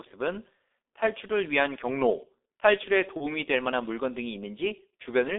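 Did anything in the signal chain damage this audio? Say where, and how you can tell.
Yes. The codec stage has degraded the whole clip: this speech has passed through G.723.1 coding, with the band held to roughly 300 Hz to 3.6 kHz. The voice is muffled and hoarse, consonants smeared, which fits a very low bitrate around 6 kbit/s. The damage is heavy. A spectrogram shows a hard ceiling at 3.6 kHz, nothing below 300 Hz, and blocky, slowly updating formant bands, because the codec refreshes its vocal-tract model only once per 30 ms frame.

At the network stage, VoIP packet loss concealed by the speech codec appears from 3.17 to 3.26 s. About 30 ms of signal went missing, consistent with one lost frame. The decoder filled the gap by repeating its last pitch and filter at falling gain, so the sound is briefly stretched and fades before recovering. The waveform shows a decaying, stretched passage, and the spectrogram shows a smeared stretch, with weak output lingering until about 3.26 s as the frame-to-frame state rebuilds.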